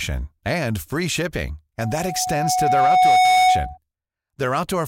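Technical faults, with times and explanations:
1.79–3.78 s, loudspeaker feedback squeal: after "and free shipping" the microphone-to-loudspeaker loop ran away at 738 Hz, a pure tone swelling over about a second and a half to roughly 10 dB above the speech.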